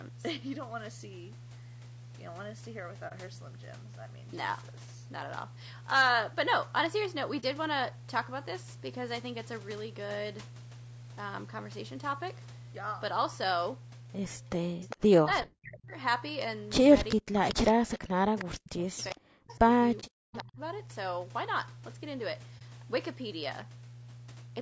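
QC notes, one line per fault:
Throughout: mains hum, a steady 60 Hz tone with low harmonics sitting about 10 dB below the speech. A ground loop or nearby transformer is coupling the power line into the signal, so the drone never changes with the talker.
Throughout: low-delay AAC compression, with speech plainly rough and grainy, noise filling the gaps between harmonics and a synthetic-sounding top end. This is likely AAC-ELD at around 32 kbps, whose short frames resolve pitch harmonics poorly. The band stops at 8 kHz, which is the call's normal microphone processing.
3.08 s, 7.40 s, 20.00 s, 22.58 s: AAC frame loss with muting, each a brief dip of about 40 ms. That fits one lost frame per event, about 30 ms of audio, zeroed by the decoder while overlapping windows fade it out and in.
14.59–15.94 s and 17.16–20.6 s: speech suppressed in double talk, with the talker dipping and cutting out in pieces, at worst by about 40 dB, over roughly one and two seconds in total. 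This is likely an echo canceller turning everything down while both sides talked.
14.83–14.94 s, 17.1–17.71 s, 18.38–18.43 s, 18.98–20.41 s: echo leak, a copy of speech arriving 405 ms late at about 20 dB below the voice, about 15 dB at 17.1 s. This is likely loudspeaker pickup that an echo canceller failed to remove.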